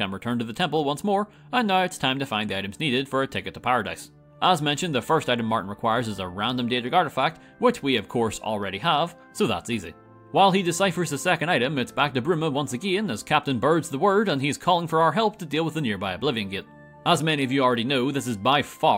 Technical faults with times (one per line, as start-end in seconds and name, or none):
none